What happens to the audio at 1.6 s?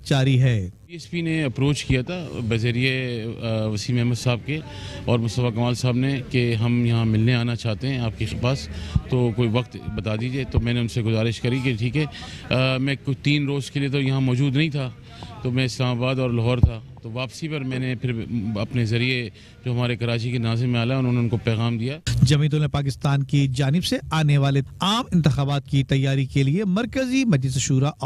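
Nothing goes wrong at 1.6 s; the audio plays through that moment intact, with no dropout, click, distortion or other fault.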